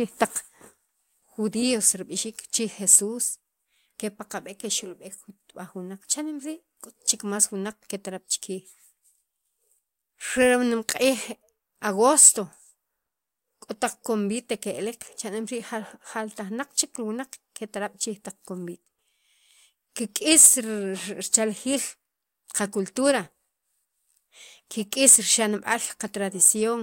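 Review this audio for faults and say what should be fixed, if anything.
Hard clipping cuts speech peaks flat at 2.92–2.96, 12.20–12.29, 20.32–20.48, 21.35, 25.08–25.15 and 26.43–26.48 s, overdriven by about 3 to 6 dB. Each burst sounds like brief crackle. The waveform shows squared-off tops, and the spectrogram shows vertical smears of high harmonics. Lower the input gain or add a limiter ahead of the converter.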